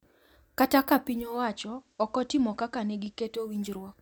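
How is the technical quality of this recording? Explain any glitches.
The speech has one glitch. From 0.98 to 3.71 s, digital radio blends to analogue: the receiver lost its digital stream and cross-faded over 488 ms to the FM broadcast, so faint hiss rises and the level drops by about 4 dB until it blends back.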